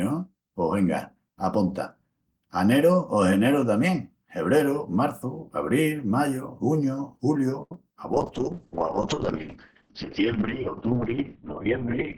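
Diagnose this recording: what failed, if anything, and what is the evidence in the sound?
Short stall from a late packet at 7.62–7.72 s, a network and jitter-buffer fault. A packet arrived late and the buffer ran dry, so the receiver held the last speech sound for about 84 ms before resuming at the same point. Nothing is lost, but the sound drags, and playback sits about 84 ms later afterwards.

Short concealed packet loss at 7.74 s, also network-side. About 10 ms of audio never reached the decoder, and the receiver patched it by extending the preceding speech and blending back in. It is heard as a brief smear or wobble just after the stall.

Call bitrate drop from 8.13 s to the end, a call-processing and codec fault. The bandwidth estimate fell and the encoder went from 32 to 6 kbps, spending 2.4 s at the floor. Audio bandwidth shrinks from 20 kHz to 4 kHz, leaving speech muffled and watery.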